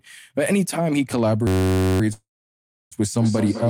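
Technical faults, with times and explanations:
1.47–2.01 s, system hang loop: the system froze while the sound hardware kept replaying one 10.67 ms stretch of its ring buffer, about 50 times, which fits a 512-sample buffer. A loop that short cycles at 93.8 Hz, so it comes across as a steady buzz, with essentially no audio lost.
2.13–2.94 s, call audio freeze: the last sound is stretched into a fading buzz or hiss, then about 680 ms of silence fills the 788 ms wait, likely from packets held up until the jitter buffer ran empty. Speech then resumes where it stopped, nothing missing, just shifted later.
3.15–3.70 s, feedback echo between two devices: the speech returns about every 200 ms, at up to about 7 dB below the direct sound, because a second device in the room replays it and the first device's microphone picks that up again, which its echo canceller does not remove since it only removes what its own device plays.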